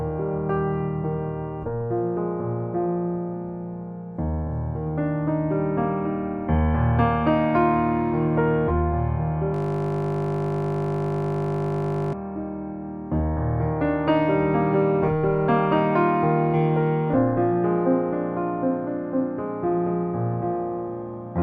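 From start to finish the sound is dull and gurgling. The top of the spectrum is missing, and what remains has a granular, swirly roughness. Upper detail flickers in and out. These are plainly audible signs of MP2 compression, likely at a low bitrate, around 80 kbps. MPEG Layer II divides the audio into 32 sub-bands and shares out bits among them. With too few bits, upper bands shut off and the rest are coarsely quantised.

At 9.54 s the sound suddenly turns into a steady buzz, which lasts until 12.13 s. This is a system hang loop. The computer or driver froze, but the audio hardware kept replaying the same ring buffer. A 20 ms slice of sound repeats over a hundred times. Because the slice is so short, the repeats fuse into a tone at 50 Hz, the loop rate.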